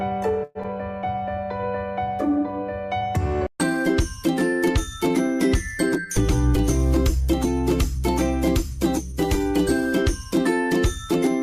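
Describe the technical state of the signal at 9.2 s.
At 9.2 s the signal is inside a jitter buffer speed-up running from 8.7 to 9.52 s. The receiver trimmed short pitch-period pieces, about 40 ms in total, so the sound plays at 104% speed with unchanged pitch. Spectrogram harmonics keep their frequencies while events arrive marginally early; the waveform shows tiny splices between cycles.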